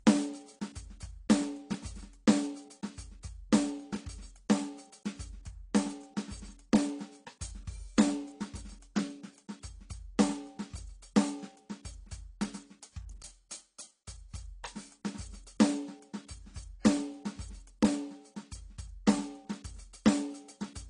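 The clip is music, and it carries transcoding between lossy codecs from start to finish. Nothing is heard above 10.2 kHz. Two kinds of coding smear sit on top of each other. This points to a low-rate AAC pass likely followed by a second MP3 encode.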